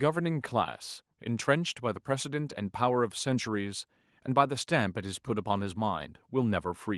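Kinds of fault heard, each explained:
No faults can be heard.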